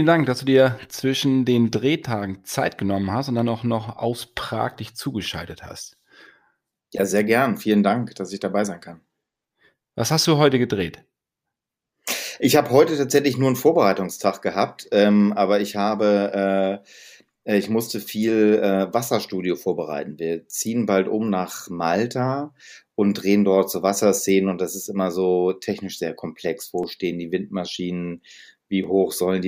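From 24.83 s, just after "und das", to 28.84 s, periodic USB or driver dropouts cut the speech every 2.0 s. Roughly a millisecond of audio is skipped each time, about three times, heard as evenly spaced ticks. Random crackle wouldn't keep that fixed spacing.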